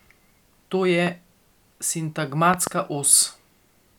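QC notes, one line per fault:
1.07–1.09 s: loud pop. A single sharp click about 10 dB above the speech, likely a brief voltage pulse from a switch, plug or static discharge riding on the signal, while the speech continues underneath.
2.54–2.69 s: loud pop. Two thumps in quick succession, the stronger about 15 dB over the speech, likely a repeated electrical spike shaped by the downstream circuitry, with the speech continuing beneath both.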